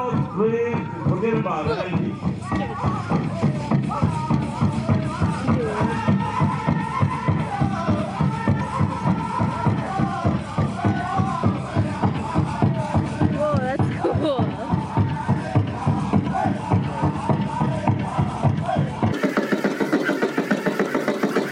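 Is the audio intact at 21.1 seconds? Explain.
No. From 19.13 s to the end at 21.52 s the clip has a wrong sample rate: it plays twice as fast and a full octave higher, which fits audio recorded near 22 kHz played at 44.1 kHz. A spectrogram shows everything shifted up an octave and squeezed to half its duration.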